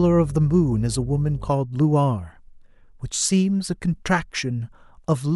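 Mains hum runs from the start of the clip to 1.5 s, a steady low drone at 50 Hz sitting well below the speech, roughly 15 dB under it. Power-line energy has leaked into the signal path, through a ground loop between connected equipment or induction from a nearby transformer, so the 50 Hz supply frequency rides along with the speech as a constant tone. It then disappears, leaving the remainder free of the drone.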